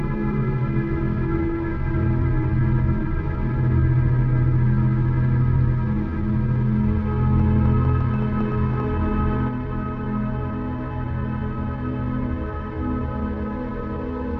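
From 7.40 s to 8.81 s a rapid ticking sits over the sound, about 7.8 clicks per second at an uneven pace, around ten in all, each much alike in shape and poking out roughly 5 dB above the audio. This train of clicks is likely interference from nearby equipment or a struggling interface injecting short pulses that have nothing to do with the recorded material.

At 9.48 s the level drops abruptly by about 4 dB and stays lower through to the end, with the sound and its background noise falling together rather than fading. That sudden gain jump likely comes from a digital gain setting or bit shift being applied in a single sample with no ramp, so the change lands as a step instead of a smooth transition.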